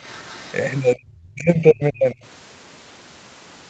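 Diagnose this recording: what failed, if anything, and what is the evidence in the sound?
The failure sits in call processing and is most likely speech suppressed in double talk by the echo canceller. Between 0.95 and 2.21 s the speech is pushed down in uneven pieces, about a second in total, dropping by roughly 40 dB at its deepest. The canceller could not separate this talker from loudspeaker echo and attenuated both.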